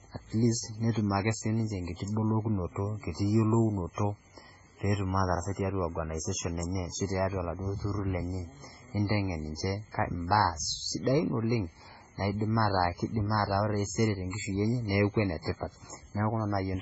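Throughout, the speech shows heavy MP3 compression: nothing above 7.7 kHz, watery swirling from weak lines dropping in and out, likely from a 16 kbps encode.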